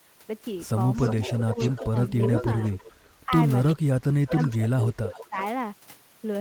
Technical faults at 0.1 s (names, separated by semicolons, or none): none